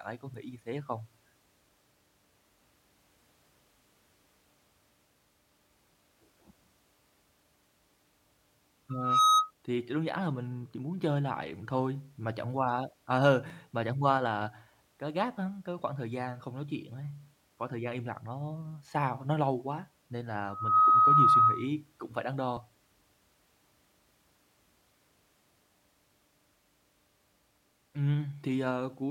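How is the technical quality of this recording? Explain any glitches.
The recording has two kinds of technical fault: two bursts of feedback and two brief skips in the speech.

Loudspeaker feedback squeal appears from 8.89 to 9.51 s and again from 20.48 to 21.69 s, both times at 1.3 kHz. The microphone is hearing the loudspeaker it drives, and at that frequency the loop gain tops unity, so the tone feeds itself. Each time a pure 1.3 kHz tone swells into a squeal over roughly a third of a second, peaking about 10 dB above the speech.

Short skips occur at 13.5 s and 22.57 s, with around 10 ms and then around 20 ms of audio missing. They are likely dropped buffers (overrun): the software fell behind, the hardware overwrote unread samples, and the surviving audio was spliced together without a gap. Each sounds like the speech jumping slightly forward, the later one skipping further.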